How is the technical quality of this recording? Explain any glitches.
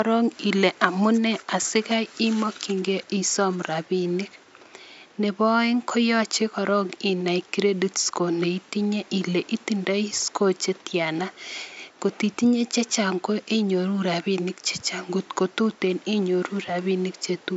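The speech signal shows no technical glitches, with only background room noise sitting about 31 dB below the voice.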